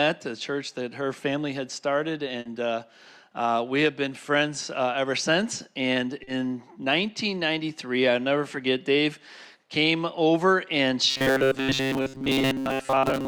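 At 2.39 to 2.46 s, a burst of packet loss drops about 60 ms. The last sound is held and faded before the audio jumps ahead, a longer gap than a simple smear.

Short concealed packet loss appears at 6.23 to 6.28 s (40 ms) and at 8.52 s. Each is a brief smear that blends back without an audible jump.

From 11.10 s to the end, the sound becomes a rigid metallic buzz at 134 Hz. This is likely robotic sound from repeated short buffers of about 7.5 ms replacing most of the real audio.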